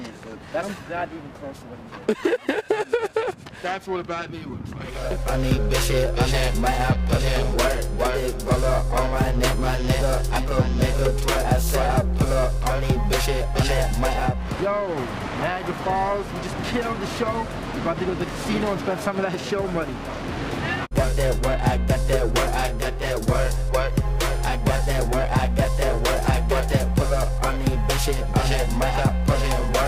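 Periodic clock jitter runs through the whole clip. Interference wobbles the converter's sampling clock at around 1 kHz, so every component picks up sidebands about that far above and below it. This gives a rough, metallic edge, harsher on high content, that disappears whenever the sound stops.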